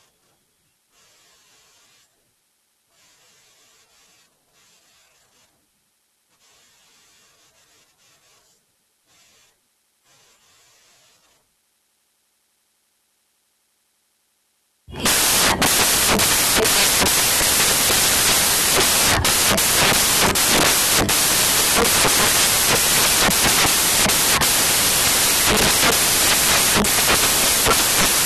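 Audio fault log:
throughout, samples built from the wrong bytes: the reader assembles each sample's bytes misaligned or in swapped order, so fast-changing low bits dominate, producing loud, harsh broadband noise, close to white on loud passages.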